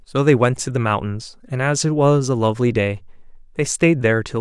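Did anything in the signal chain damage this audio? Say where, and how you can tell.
No, nothing in the signal chain has left an audible mark on this speech recording. At no point can any stage, from capture through to playback, be heard altering the signal.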